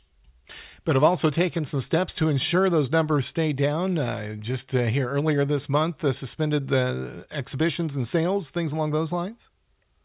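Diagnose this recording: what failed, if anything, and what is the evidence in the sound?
Nothing in the recording points to a failure at any stage of the chain. No stage, from capture through to playback, leaves audible evidence of a problem.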